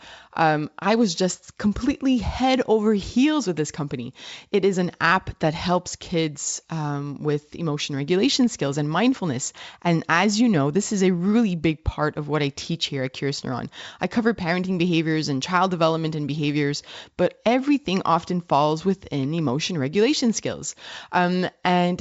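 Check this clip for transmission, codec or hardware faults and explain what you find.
Nothing here points to a transmission, codec or hardware problem; the speech comes over a G.722 wideband link at 64 kbit/s, and at that rate the coding leaves at most a faint trace.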